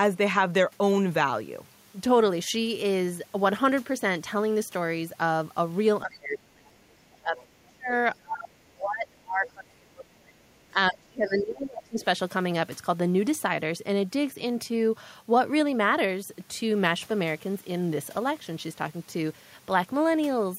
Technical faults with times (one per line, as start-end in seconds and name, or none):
6.03-7.89 speech suppressed in double talk
7.36-7.45 other side's voice leaking through
8.19-10.36 speech suppressed in double talk
10.69-11.99 speech suppressed in double talk